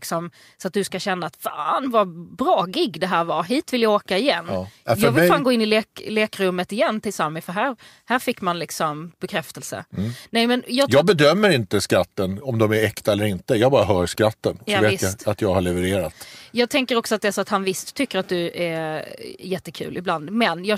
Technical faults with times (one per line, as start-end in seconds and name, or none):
none